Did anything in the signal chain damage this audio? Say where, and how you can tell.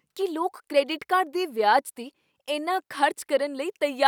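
No, nothing in the signal chain damaged this audio.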